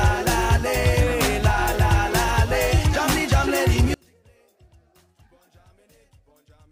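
From 3.94 s to the end, the sound sinks by about 36 dB to a faint remnant. This is one channel inverted, likely one side's polarity flipped so the shared content cancels in the mono sum. Unlike a dropout, a trace persists rather than silence.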